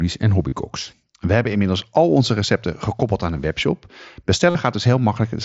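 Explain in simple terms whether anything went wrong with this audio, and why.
Three short dropouts were patched over, which is concealed Bluetooth headset packet loss. The link between headset and phone lost audio packets, and the receiver filled each gap by repeating the closest-matching bit of the sound just before it. The single loss at 1.52 s is almost hidden. The longer gaps, 0.49 to 0.52 s and 4.50 to 4.55 s, turn into a brief buzzy held tone with a slight wobble as the real sound comes back over the wideband mSBC headset link.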